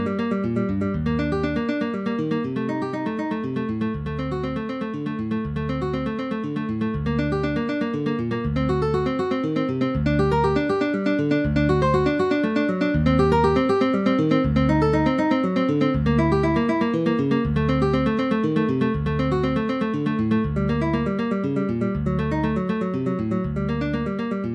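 No technical faults can be heard anywhere in this audio.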